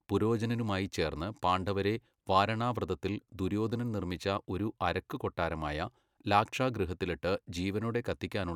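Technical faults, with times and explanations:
No technical faults can be heard anywhere in this speech recording. Nothing in it calls for a time stamp or an explanation.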